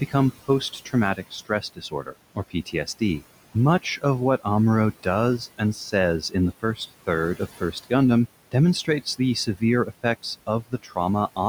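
Noise suppressor artifacts run through the whole of this speech recording. The room noise sits about 19 dB below the speech, and the suppressor judges it frame by frame, pulling the bands it treats as steady noise down by about 17 dB. As a result, the background sinks away in the gaps and comes back up under the speech wherever the suppressor lets the signal through. Speech cut by the noise suppressor occurs in four stretches, at 0.08 to 0.49 s, 0.85 to 3.22 s, 5.39 to 7.91 s and 8.52 to 10.97 s. In each stretch the suppressor mistook parts of the speech for noise and turned them down along with the background, by up to about 15, 16, 14 and 15 dB respectively. The affected portions total roughly a tenth, a half, a third and under half a second, and those sounds come out swallowed.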